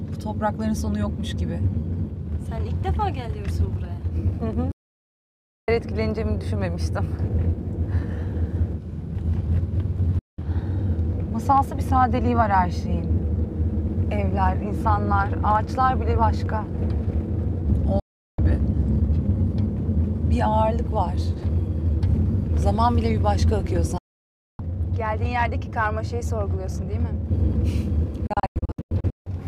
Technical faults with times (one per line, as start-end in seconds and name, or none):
4.72-5.68 digital broadcast dropout
10.19-10.39 digital broadcast dropout
18.00-18.39 digital broadcast dropout
23.98-24.59 digital broadcast dropout
28.27-29.27 digital broadcast dropout